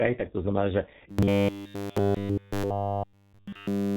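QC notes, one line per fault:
Throughout: G.723.1 codec at 6.3 kbit/s, heavily damaged. Nothing above 4 kHz survives, and its slowly updated voice model makes the speech muffled and hoarse, with blurred consonants.
1.10 to 3.97 s: robotic sound from repeated short buffers after "tak to znamená že". A rigid 100 Hz buzz, likely from 10 ms chunks replayed while nearly all real audio is skipped.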